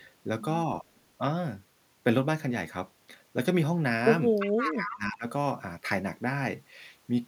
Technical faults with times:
4.39-4.98 echo leak
4.63-5.26 speech suppressed in double talk

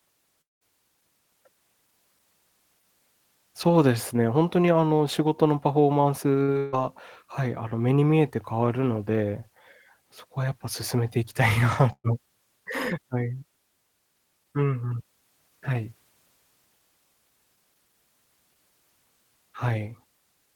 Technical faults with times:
0.41-0.63 long network dropout
6.43-6.74 burst of packet loss
11.92-12.06 burst of packet loss

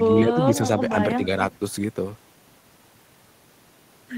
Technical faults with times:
0.07-0.40 speech suppressed in double talk

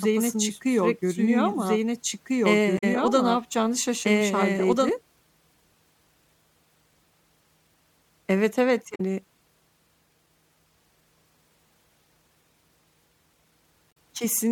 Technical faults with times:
0.00-4.89 doubled audio track
2.75-2.84 damaged data in a compressed stream
8.92-9.00 damaged data in a compressed stream
13.88-13.97 damaged data in a compressed stream

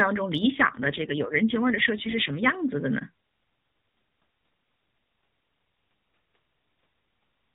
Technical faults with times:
0.50-2.57 AMR rate drop

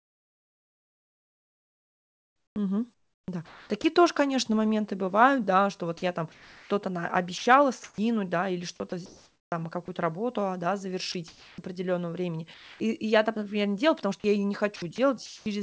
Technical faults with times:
0.00-3.84 sound chopped by the voice detector
5.98-6.70 sound chopped by the voice detector
7.38-7.98 sound chopped by the voice detector
8.76-9.88 sound chopped by the voice detector
11.12-11.58 sound chopped by the voice detector
12.54-12.80 sound dropped by the voice detector
14.20-14.24 sound dropped by the voice detector
14.76-15.46 sound chopped by the voice detector

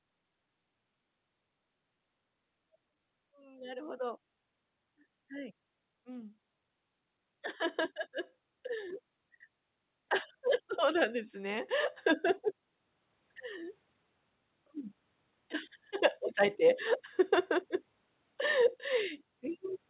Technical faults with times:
3.31-4.28 automatic gain rising
10.67-12.00 automatic gain rising

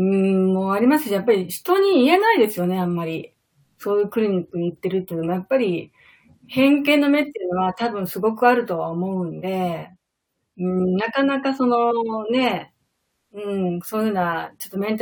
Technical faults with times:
none

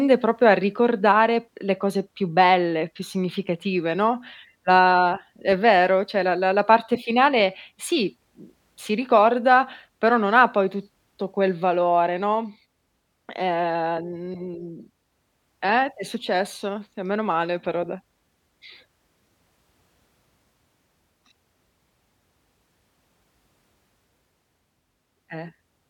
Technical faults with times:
none

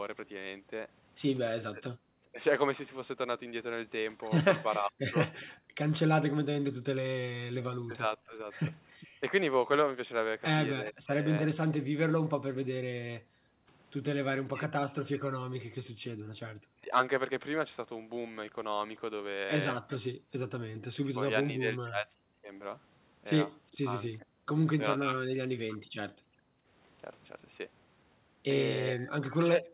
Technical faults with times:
1.69-11.28 speech suppressed in double talk
4.72-5.46 echo leak
5.51-5.55 background gated by the echo canceller
9.00-10.91 echo leak
9.07-9.20 background gated by the echo canceller
13.20-16.32 background gated by the echo canceller
14.40-16.92 speech suppressed in double talk
19.88-24.22 echo leak
20.13-20.30 background gated by the echo canceller
21.05-25.87 speech suppressed in double talk
26.15-26.69 background gated by the echo canceller
28.92-29.69 speech suppressed in double talk

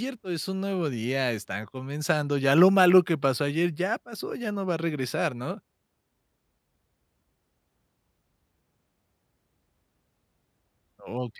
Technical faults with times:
none

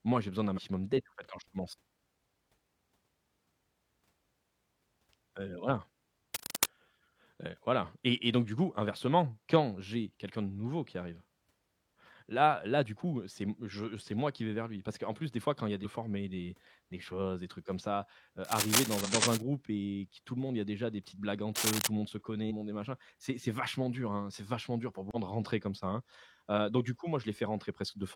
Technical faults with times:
0.53-0.59 damaged data in a compressed stream
6.34-6.66 cable scratch noise
15.81-15.86 damaged data in a compressed stream
18.45-19.42 cable scratch noise
19.01-19.07 damaged data in a compressed stream
21.55-21.87 cable scratch noise
22.46-22.52 damaged data in a compressed stream
25.11-25.16 damaged data in a compressed stream

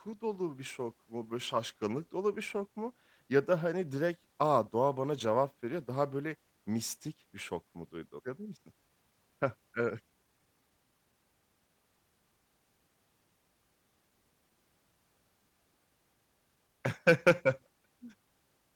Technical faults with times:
8.19 skip ahead
8.29-9.12 jitter buffer speed-up
10.10-11.13 jitter buffer speed-up

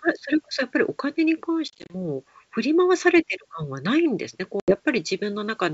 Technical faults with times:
1.68-1.94 packet loss on an ADPCM call
4.60-4.77 packet loss on an ADPCM call

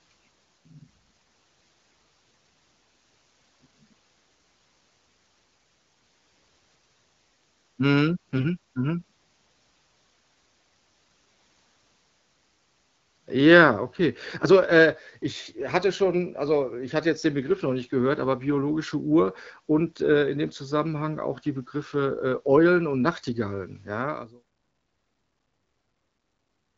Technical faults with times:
8.36-8.44 AMR bit errors

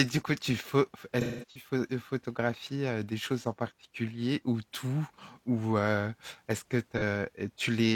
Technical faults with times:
1.21-1.69 AAC frame loss with concealment
6.97-7.03 AAC frame loss with concealment

